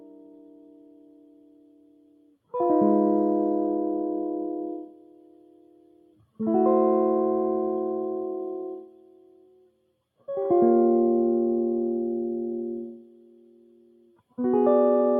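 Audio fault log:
Throughout: noise suppressor applied to music. A speech-oriented suppressor is running on this music and treats sustained tones, ambience and reverb as noise to be removed. Its gain moves over a range of around 20 dB as it decides what counts as wanted sound. Attacks pass largely intact while held notes and decays are pulled down, so the music pumps and flutters and loses body between onsets.
0.00–2.54 s, 4.81–6.40 s, 8.76–10.01 s, 12.87–14.39 s: sound cut by the noise suppressor. In each of these four stretches the suppressor judged the material to be noise and attenuated it more heavily than the rest, reaching a deepest drop of about 18 dB. The sustained and fading parts suffer most. Their level sinks audibly and their tails are cut short, while any sharper transients inside these spans still mostly come through.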